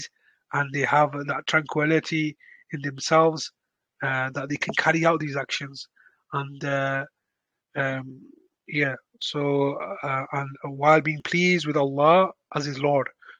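At 4.49 s a brief noisy smear replaces the sound for about 10 ms: one lost LE Audio frame, which the LC3 decoder concealed by reusing the previous spectrum with randomised signs. From 7.24 to 13.19 s, regular ticks recur every 1.99 s, about four in all. These are periodic USB or driver dropouts, where a blocked bus or driver skips roughly 10 ms of audio each time.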